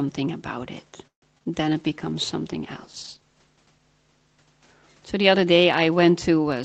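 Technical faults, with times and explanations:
1.07–1.24 s, call audio freeze: the speech halts for about 0.17 s, with roughly 0.12 s of that silent after the last sound trails off briefly. This is likely a jitter buffer running dry while packets were held up in transit. When they arrived, playback picked up exactly where it stopped, so nothing is lost. The pause is simply inserted, pushing everything after it about 147 ms later than it would otherwise have played.
1.70–4.52 s, call bitrate drop: the Opus stream falls from 32 kbps to 15 kbps, staying at that floor for about 1.45 s before climbing back. With fewer bits per frame the encoder quantises the spectrum more coarsely, so the speech takes on a rougher, watery texture and loses some crispness. It stays degraded across this stretch until the rate recovers, while the call path's 8 kHz bandwidth limit applies as usual.
1.78–2.11 s, jitter buffer slow-down: over this third of a second the receiver stretched the audio by 53 ms, playing it at about 86% speed. 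It did so by repeating individual pitch periods and short pause fragments to build up a reserve. Pitch stays the same, but syllables sound drawn out, and the effect overlaps the start of the bitrate drop.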